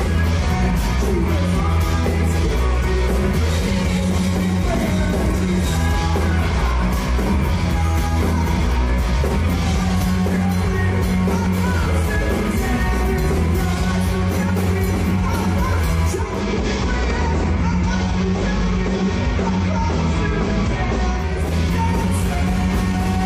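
From 16.05 to 21.57 s, digital radio blending to analogue: a 472 ms crossfade to FM adds hiss around 35 dB down and lowers level about 1 dB.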